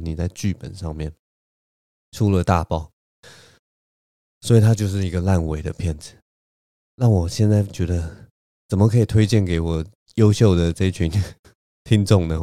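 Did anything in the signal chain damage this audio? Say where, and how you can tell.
No, nothing in the signal chain damaged this audio.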